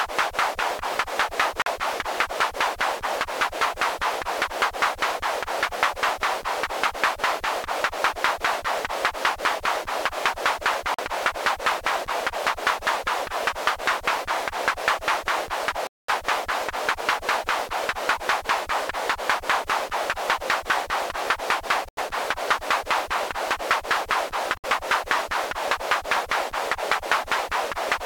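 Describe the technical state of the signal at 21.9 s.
At 21.9 s the signal drops out completely from 21.89 to 21.99 s, a hole of about 0.1 s, most likely a Bluetooth dropout: packets failed to reach the headphones in time and were discarded, which fits a handful of lost packets. Unlike a stall or buffer underrun, where playback pauses and then continues from the same point, the sound here comes back further along, so the missing stretch is skipped rather than delayed.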